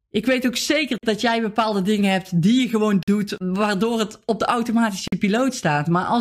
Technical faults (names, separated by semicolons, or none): gap between chunks